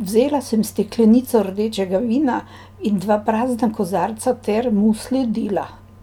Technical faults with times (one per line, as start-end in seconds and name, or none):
none